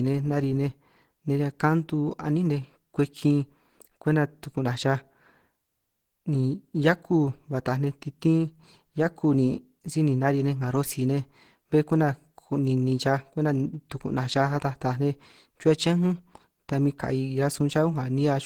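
From start to finish the speech has a muffled, hoarse quality with a rough, grainy texture laid over it, and the damage is plainly audible even though the spectrum still reaches to about 20.2 kHz. The likely cause is Opus compression at a low rate, which fits roughly 16 kbps in its hybrid mode: a speech-oriented core handles the lower band while the upper bands are filled in coarsely, leaving the top full but noisy.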